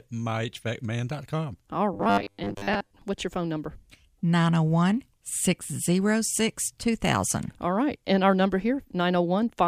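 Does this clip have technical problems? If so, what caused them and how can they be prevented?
Yes. From 1.94 to 3.02 s, just before "what's your phone number", there is robotic sound from repeated short buffers: a rigid 100 Hz metallic buzz, likely from most of the audio being replaced by repeats of a 10 ms buffer. Unlike ordinary packet-loss dropouts, the fixed pitch persists. Giving the audio path a larger jitter buffer and steadier scheduling prevents it.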